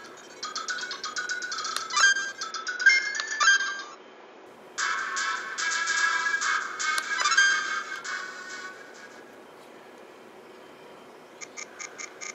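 From 2.51 s to 4.46 s the sound loses everything above 7 kHz and takes on a different tone, with a new, low background noise roughly 45 dB under the signal, then clears again at 4.46 s. The cause is likely the input switching to a poorer device and back, with no gap at either switch and no noticeable level change. A new noise floor arriving together with the narrower band is what separates this from a simple low-pass filter or codec bandwidth drop.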